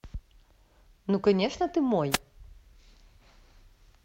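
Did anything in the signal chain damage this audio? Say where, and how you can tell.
Yes. At 2.11 s a short burst of hiss and static, lasting about 70 ms until 2.18 s, sweeps over the speech. That is a wireless microphone noise hit, arising in the analogue radio link ahead of the converter. Reflected paths cancelled the FM carrier for a moment, so the receiver's own noise rose through the fade and briefly masked the signal. Its short, swishing character is the signature of a multipath dropout.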